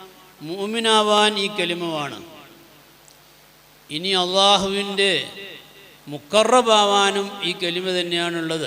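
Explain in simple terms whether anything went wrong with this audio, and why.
Three sharp clicks, at 1.18, 4.29 and 6.38 seconds, are most likely caused by dropped samples: somewhere along the way, the stream lost a tiny sliver of audio, well under a thousandth of a second each time. The sound then jumps straight from where it was to a slightly later point. That gap is far too short to hear anything missing. What you hear instead is the sudden jump itself, as a brief, sharp tick.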